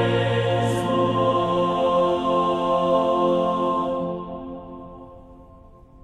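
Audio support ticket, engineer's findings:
Engineer's findings: no fault found in the music audio for this ticket.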